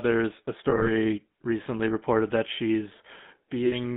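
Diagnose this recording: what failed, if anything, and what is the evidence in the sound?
The codec stage is at fault throughout. The whole clip carries the buzzy, gravelly roughness of the GSM full-rate codec, and it is plainly audible. The band runs only from about 150 Hz to 3.6 kHz, which fits a 13 kbps GSM full-rate link. This is the codec resynthesising each stretch from a vocal-tract model driven by sparse, regularly spaced pulses. That pulse excitation is what makes the texture rough, where a plain narrowband filter would leave the sound smooth but dull.

The network path also lost GSM frames, twice. From 0.70 to 0.87 s, just before "recently reported that", about 80 ms of the 160 ms span is missing, scattered in short gaps of around 20 ms each. At 3.66 to 3.74 s, about 60 ms more is gone. In each gap the decoder repeats the last good frame, so the sound is held as a brief metallic ring rather than dropping to silence or clicking, as a buffer dropout would.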